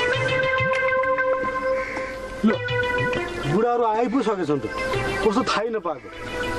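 Nothing in the recording stood out as a technical fault on listening.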